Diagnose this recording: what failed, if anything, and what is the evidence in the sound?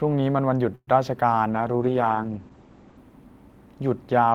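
At the network and jitter-buffer stage, a call audio freeze occurs from 0.75 to 0.89 s. Packets were likely held up in transit, so the receiver's buffer ran dry and it had to invent sound: the last sound is stretched into a fading buzz, then about 40 ms of silence. When packets resume, the speech carries on where it stopped, nothing lost, but everything after sits about 119 ms later.

In the codec stage, a call bitrate drop runs from 1.53 to 3.05 s. The bandwidth estimate fell and the Opus encoder went from 32 kbps to 11 kbps, holding the lowest rate for about 1.46 s. At that rate it discards content above 8 kHz, down from 20 kHz, so the speech turns muffled and coarsely grained, with a rough, watery texture, until the bitrate recovers near 3.05 s.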